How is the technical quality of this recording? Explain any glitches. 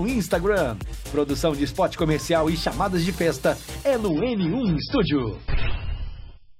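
Quality falls sharply in the final stretch. From 4.09 s to the end, an adaptive stream at a lower bitrate switches abruptly without a gap. Nothing remains above 5.6 kHz and artefacts swell, which points to a drop from about 128 to 16 kbit/s MP3 rather than a dropout.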